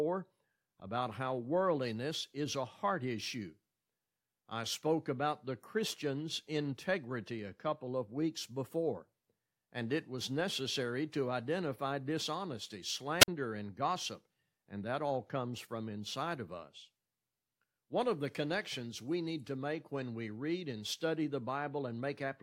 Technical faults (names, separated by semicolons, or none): wireless microphone squelch dropout